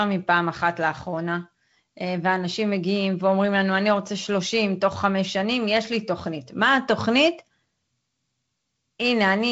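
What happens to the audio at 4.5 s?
Nothing goes wrong at 4.5 s: the speech there carries on intact through the G.722 wideband telephone coding, with the light hiss and band limit that coding brings at 48 kbit/s.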